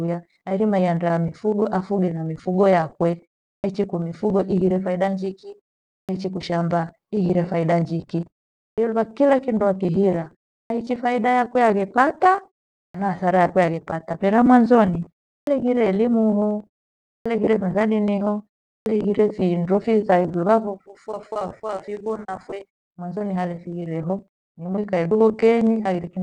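Speech with a clipped start after a pause at 3.55, 6.00, 8.69, 10.61, 12.86, 15.38, 17.17 and 18.78 s. Each onset loses 80 to 92 ms while the output device wakes from silence, so waveforms jump abruptly from flat to full level.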